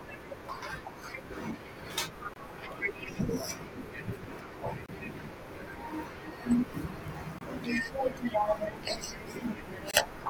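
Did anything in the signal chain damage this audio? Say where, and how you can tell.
Yes, a gap between chunks at the playback or chunked-delivery stage: hard-edged 25 ms holes at 2.34–2.36, 4.86–4.89, 7.39–7.41 and 9.91–9.94 s. They recur every 2.5 s of audio, consistent with 2.5 s chunks each started late, so nothing is lost.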